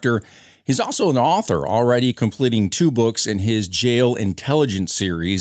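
No technical faults can be heard in this speech clip. It has passed through call microphone processing and a WebRTC call path, and the sound stops at about 8 kHz, which fits the limited bandwidth of a call codec.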